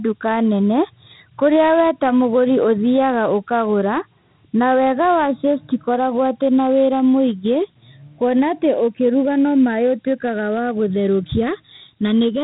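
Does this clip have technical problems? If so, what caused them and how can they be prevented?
Yes. Channels drifting apart throughout: clocks differing by around 50 ppm let the inter-channel delay creep to about 0.7 ms, so the spectrogram of the mono sum shows slowly sweeping comb notches. Prevent it by clocking both channels from one device.

4-bit ADPCM compression throughout: heavy gritty hiss rides on loud speech, and the spectrogram has a hard ceiling at 3.9 kHz with level-tracking noise, fitting 32 kbps. Prevent it by recording with lossless or higher-quality coding.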